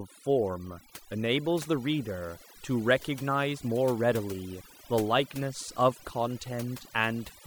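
From the first second to the end, the speech has overdone noise removal running over it. Whoever set the denoiser pushed it far too hard, so any frequency band sitting close to its noise estimate gets pulled right down or muted, and the quieter bits of the voice get dragged out along with the noise. What you're left with is a lowered background full of little twinkly specks.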